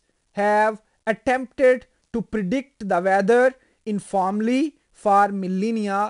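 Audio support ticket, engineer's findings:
4-bit ADPCM compression, throughout the speech. Gritty hiss riding every loud syllable, rough attacks. Step size lags transients. Nothing above 10.6 kHz, fitting a roughly 22 kHz sample rate and an 89 kbps stream.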